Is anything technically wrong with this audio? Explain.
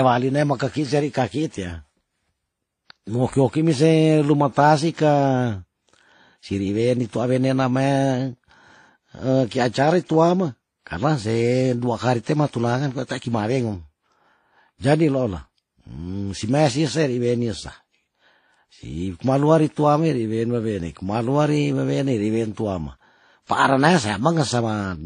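Yes. All the way through the speech there's a hard ceiling at about 9.7 kHz, and the artefacts don't sound like a single encoder. It's likely transcoding between lossy codecs: an older WMA encode at 48 kbit/s, then a low-bitrate AAC-LC pass over it at 32 kbit/s. The second encoder wastes its bits on the first one's damage and adds its own, so you hear both layers of artefacts together, with the dullness of that low cut-off.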